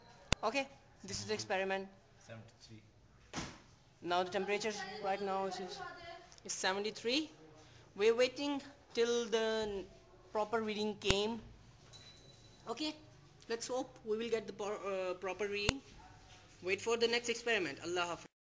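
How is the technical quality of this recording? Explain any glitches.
The recording has one recurring glitch. A file header is played as audio at 0.33, 11.11 and 15.69 seconds. Each time, a sharp, loud click snaps out. Separate WAV pieces were joined without stripping their headers. Those header bytes were decoded as samples, so every new piece begins with this burst.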